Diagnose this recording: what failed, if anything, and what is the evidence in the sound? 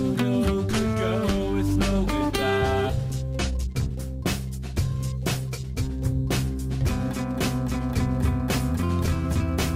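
Skip ahead at 2.89–2.91 s, in the network or jitter buffer: roughly 0.7 s of audio vanishes and the two sides butt together, an abrupt waveform seam with no gap.

Jitter buffer speed-up from 3.51–3.97 s at 145% and 4.50–5.73 s at 110%: pitch periods were cut to shed delay. The spectrogram shows time-compressed events with unchanged harmonic spacing.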